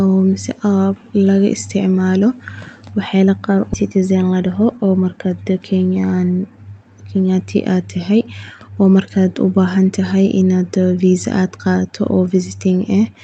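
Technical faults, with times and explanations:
3.73–3.80 s: skip ahead. Around 0.4 s of speech was dropped and the edges joined directly; the waveform shows an abrupt seam and the spectrogram a sudden discontinuity.
4.31–4.72 s: jitter buffer speed-up. Removing repeated pitch-period slices, about 50 ms in all, plays the speech 10% faster at the same pitch; spectrogram syllables compress while harmonic spacing stays unchanged.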